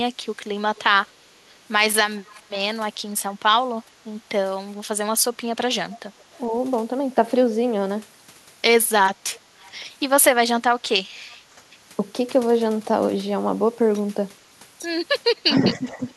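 From 0.55 to 1.4 s the speech dips by up to about 15 dB in short bites adding up to roughly a tenth of a second. This is speech suppressed in double talk, likely because the echo canceller, hearing both ends at once, could not tell the near talker from loudspeaker echo and turned everything down.

Inside that stretch, from 0.75 to 1.07 s, a faint second copy of the speech trails 426 ms behind the original, about 30 dB below it. The same delayed ghost returns at 2.18 to 3.23 s at about 30 dB down, at 5.98 to 6.38 s at about 35 dB down, and at 9.32 to 9.71 s at about 30 dB down. This is echo leak, likely from a far end on loudspeaker whose canceller let part of the microphone pickup through and sent it back.

Between 3.98 and 4.02 s the room tone drops by about 6 dB for 40 ms and then recovers. This is background gated by the echo canceller. While the loudspeaker played, the canceller clamped the microphone, and the ambience dipped until it released.

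From 15.47 to 16.04 s the speech is pulled down again by up to about 10 dB, for about 0.4 s of that window. This is another case of speech suppressed in double talk, likely the canceller again damping its own talker along with the echo while both ends overlapped.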